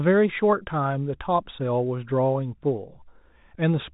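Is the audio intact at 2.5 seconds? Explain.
Yes, the audio is intact at 2.5 seconds, with no dropout, click or other fault there, only the normal narrow telephone band of G.711 telephone coding, with nothing above about 3.8 kHz.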